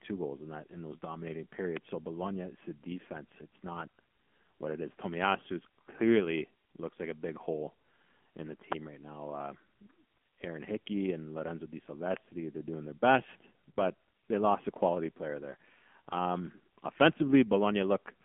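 Speech, heard throughout through an AMR narrowband mobile codec. The audio is confined to a telephone band of roughly 200 Hz to 3.4 kHz, with nothing at all above 3.5 kHz, so sibilants and consonant detail are dull and the low body of the voice is thin. The codec damage is plainly audible: the voice takes on a buzzy, synthetic edge from the pulse-driven vocal-tract model, which fits a low AMR-NB mode of around 7.4 kbps.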